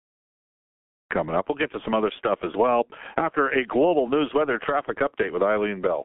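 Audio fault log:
Throughout, G.723.1 codec: speech is heavily muffled, hoarse and capped near 3.4 kHz. Slow 30 ms voice-model updates blur the consonants, and that hoarseness, which plain telephone filtering lacks, fits roughly 6 kbit/s coding.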